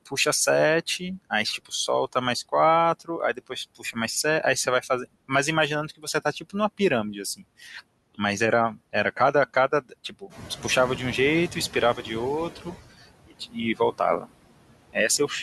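A speech recording with a steady, processed character throughout: between phrases the background sinks away, then swells back under the voice. These are noise suppressor artifacts. The suppressor is pulling down every frequency band it judges to be steady noise, by about 20 dB, and re-deciding frame by frame. Repeatedly, soft parts of the speech go faint or seem swallowed, with consonants and word endings dipping by about 17 to 19 dB. This is speech cut by the noise suppressor, heard from 0.06 to 3.96 s (around half a second in total), 5.97 to 6.8 s, 7.36 to 8.19 s, 8.76 to 10.64 s, 11.97 to 14.25 s (under half a second in total) and 14.93 to 15.31 s. Those quiet speech components resemble the noise profile closely enough that the suppressor attenuates them along with the background. Around 10.5 s the room noise picks up by about 12 dB, ending roughly 13 dB below the speech, and from 10.29 to 12.79 s that louder background comes through stronger before gradually settling down. 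This is the noise suppressor catching up. Its noise estimate lags the sudden rise, so reduction starts weak, reaching only about 13 dB, and takes roughly 2.5 s to adapt to the new level.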